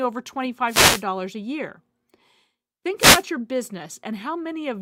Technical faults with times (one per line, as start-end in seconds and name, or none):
0.66-1.05 wireless microphone noise hit
2.97-3.24 wireless microphone noise hit